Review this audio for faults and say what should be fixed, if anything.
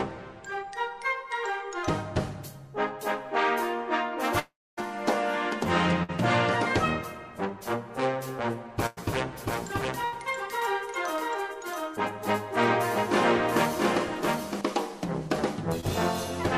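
From 4.39 to 4.79 s the sound stretches into a fading buzz and then drops to near silence for about a quarter of a second. It resumes with roughly 0.38 s gone. This is likely a long network dropout. A steadier network path or a larger jitter buffer would prevent it.

At 6.03, 8.86 and 10.05 s the sound holds as a decaying buzz or hiss and then jumps ahead, skipping about 60, 100 and 80 ms. These are bursts of packet loss, each concealed by extending the last sound until the stream returns. Forward error correction or packet redundancy would prevent them.

From 9.40 to 14.61 s a second, equally loud full-band copy runs about seven tenths of a second behind. It has no reverb tail and switches on and off abruptly. This is a doubled audio track, likely from the same signal captured again through a slower path. Routing only one capture path into the mix would prevent it.

At 15.8 s a brief smear replaces about 20 ms of sound. 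This is short concealed packet loss, where the receiver patched the gap and blended back into the real audio. A slightly deeper jitter buffer would prevent it.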